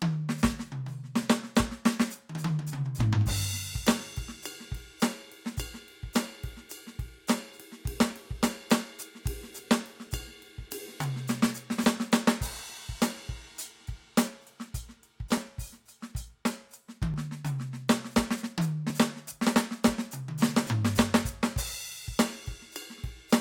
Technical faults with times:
1.23-22.44 clock drift buffer slips

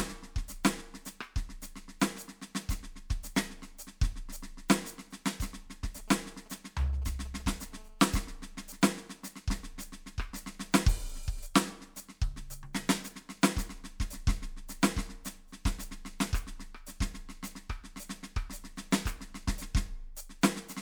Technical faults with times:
5.84-7.74 GSM signalling bursts
7.76-9.24 GSM phone buzz

